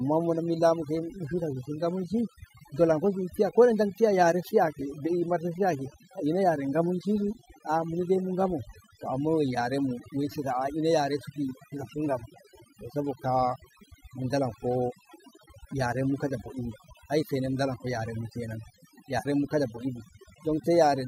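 Throughout the speech, overdone noise removal is audible: a noise reduction stage set far too aggressively pulls individual frequency bands down whenever they sit near its noise estimate, taking quiet voice detail with them. The background drops and breaks up into twinkling specks.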